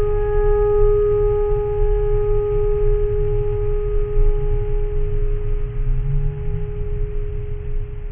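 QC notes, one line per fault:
Throughout, aliasing: highs above 3 kHz fold back as gritty, unrelated tones, faint but audible, which fits a careless drop to a 6 kHz rate.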